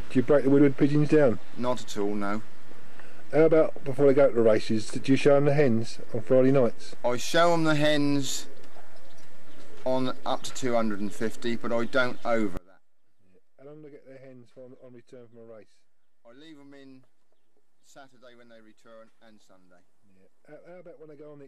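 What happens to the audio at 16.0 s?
At 16.0 s the audio is inside a stretch, from 12.57 s to the end, where one stereo channel has likely been inverted in polarity. The shared content cancels when the channels combine in mono, so the sound drops by about 26 dB, leaving a faint remnant.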